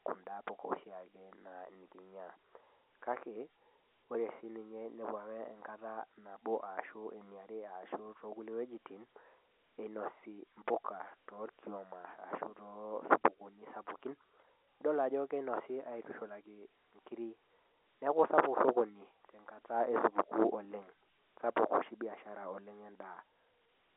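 No technical faults are audible.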